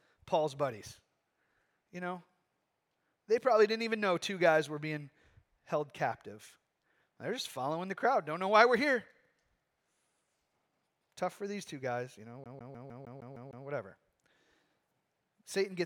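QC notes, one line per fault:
12.44–13.66 s, CD stuck on one turn: right after "two guys you know" the speech locks into a loop about 153 ms long that plays eight times over, each pass cut off by a brief mute where the pickup jumps back a track at the same point on every revolution. The result is a rapid, metronomic stutter. On a waveform the identical 153 ms block repeats with thin gaps between; a spectrogram shows the same pattern tiled at even spacing.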